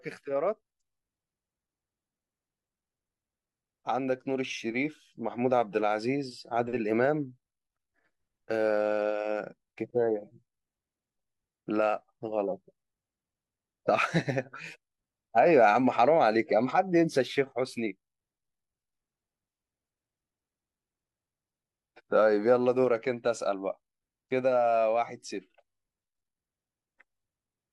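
Listening through this speech recording, nothing stood out as a technical problem.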